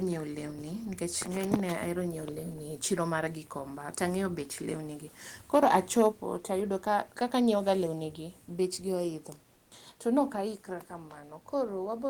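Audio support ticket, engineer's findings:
Microphone overload at 1.53–1.55 s and 5.54–6.07 s, about 5 dB and 6 dB over full scale. Harsh crackle on loud peaks, likely input gain set too high at the converter. Waveform shows flattened peak tops: about 7% of samples in the short burst, fewer across the longer stretch. Spectrogram shows broadband smear above the harmonics.

Microphone volume stepped down at 6.12 s (about −5 dB) and 10.41 s (about −3 dB). Abrupt level drop in sound and room noise together, the first right after the overload. Likely the call software's automatic input-gain reduction responding to loud or clipping input. Waveform envelope and spectrogram brightness step down instantly, with no ramp.

Comfort noise in place of the background, 9.53–9.71 s, about 180 ms. The room noise, normally about 37 dB under the speech, is replaced by steady, featureless hiss about 4 dB quieter. 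Likely Opus discontinuous transmission with receiver-side noise fill. On the spectrogram the textured background becomes a smooth, uniform band.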